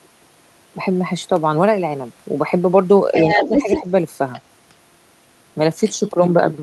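From 3.13 to 3.81 s the other side's voice leaks through at roughly the talker's own level, likely residual echo the canceller missed. A second voice layered on top marks it, not a dip. From 3.37 to 3.88 s, overlapping it, the talker's speech is suppressed in double talk: brief dips of a few decibels, about a fifth of a second in all, likely the canceller turning down both voices. At 4.33 to 4.42 s another faint scrap of the far voice leaks through, far quieter than the speech.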